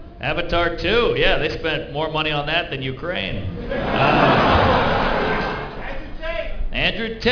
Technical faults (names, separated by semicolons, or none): aliasing